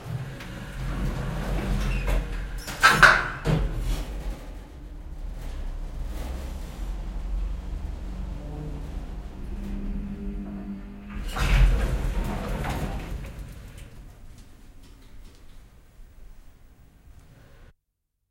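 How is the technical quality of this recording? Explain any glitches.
The audio holds together without any glitches, dropouts or interruptions, so there is nothing to explain.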